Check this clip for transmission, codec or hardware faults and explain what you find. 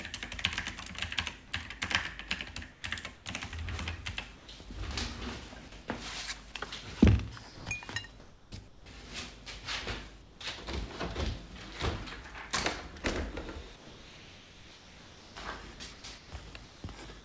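Voice-detector gating faults recur throughout the clip, heard through a call codec that leaves nothing above 8 kHz, consistent with G.722.

Sound dropped by the voice detector occurs at 1.48–1.52 s (40 ms), 2.72–2.84 s (120 ms), 4.36–4.48 s (120 ms) and 10.22–10.40 s (180 ms). The sender's detector likely took quiet sound for background and stopped transmitting. Each time the sound gives way to steady noise or near silence, then returns.

Comfort noise in place of the background runs from 2.72 to 3.26 s. Sending likely paused under discontinuous transmission, and the receiver filled about 220 ms with synthetic noise. The detailed real background turns into a flat, featureless hiss before the sound resumes.

Sound chopped by the voice detector appears at 5.68–6.54 s, 7.56–8.86 s and 13.76 s through the end. The detector likely toggled repeatedly between sending and muting, so parts of the sound were replaced by comfort noise, about 2.2 s of it in the final stretch. 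The result is choppy, with two or more holes in the sound.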